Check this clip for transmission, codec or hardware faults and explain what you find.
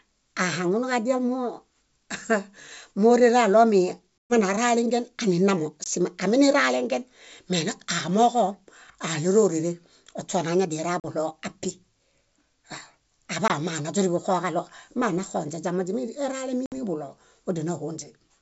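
The clip has one kind of fault, repeated five times.

Packet loss on an ADPCM call occurs at 4.19 to 4.34 s (120 ms lost), 5.84 to 5.87 s (20 ms), 11.00 to 11.05 s (40 ms), 13.48 to 13.51 s (20 ms) and 16.66 to 16.78 s (60 ms). The longest gap suggests several consecutive packets went missing, and the 20 ms holes suggest single ones. Each hole is filled with silence, which leaves the decoder's adaptive predictor and step size out of step with the sender's. The speech therefore restarts slightly distorted, before recovering within some tens of milliseconds. The wideband G.722 coding at 64 kbit/s keeps the speech bright up to about 7 kHz.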